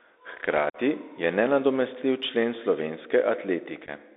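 Right from the start the whole clip sits on a Bluetooth CVSD headset codec. The speech is squeezed into a phone-style band of roughly 300 Hz to 3.7 kHz, which fits a 64 kbps CVSD link. That codec tracks the waveform one bit at a time with an adapting step, and the damage is plainly audible: a grainy hiss under everything, scratchy s sounds, and some distortion where louder, brighter bits outrun the step size.

At 0.70 to 0.77 s there's unconcealed Bluetooth headset packet loss. About 45 ms of audio, several packets' worth, never arrived and was replaced with silence or an idle pattern, so you get a short hard-edged hole and a quieter restart. A smaller one hits at 3.86 to 3.90 s. That's about 7.5 ms, roughly a single packet, heard as a brief dropout.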